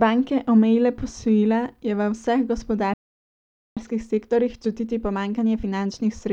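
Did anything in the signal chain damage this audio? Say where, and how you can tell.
Yes. A playback stall hit at the playback stage: right after "posojila je v vseh" the speech drops to silence from 2.94 to 3.77 s, about 830 ms, then resumes where it stopped. The likely cause is the player running out of buffered data or its thread being blocked.

Time-compressed catch-up follows, also at playback. To clear the backlog, the player cuts out short slices and cross-fades the joins. From 3.77 s to the end, the speech runs 1.15 times faster at unchanged pitch.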